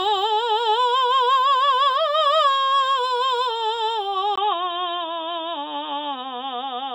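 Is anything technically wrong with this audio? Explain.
Yes. At 4.36 s the input was likely switched to a poorer device, which passes nothing above 3.8 kHz and adds its own noise floor well below the signal. After a brief 20 ms gap, the music turns dull and boxy through to the end, with little change in level.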